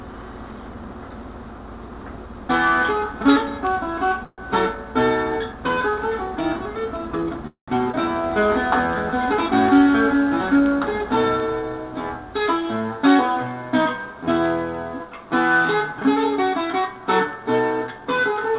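At 4.24 s the sound stalls for about 0.17 s. A fading buzz or hiss fills the gap, and the last 20 ms are silent. At 7.47 s a longer stall of 0.23 s follows, with 120 ms of silence at its end. Each is a call audio freeze. The likely cause is delayed packets that drained the jitter buffer, so the receiver stretched the last sound until packets arrived. Nothing is lost. A gap is inserted.

At 7.92 s the audio skips ahead. Roughly 150 ms of sound are dropped. The two sides are joined almost directly, with an 18 ms patch. This cuts the delay the previous freeze added.

From 8.22 s to 10.19 s a jitter buffer slow-down follows. The receiver repeats single pitch periods to rebuild its reserve. The audio runs at 94% speed, adding 133 ms. Pitch stays the same, but sounds are drawn out.

Jitter buffer speed-up happens twice. From 12.40 s to 13.98 s the audio runs at 110%, and roughly 150 ms are cut out. 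From 17.91 s to 18.51 s it runs at 108%, with roughly 50 ms removed. Short pitch-period pieces are dropped to shrink an overfull buffer. The sound seems hurried but keeps its pitch.

Throughout, the G.711 mu-law path at 64 kbps leaves nothing above 4 kHz.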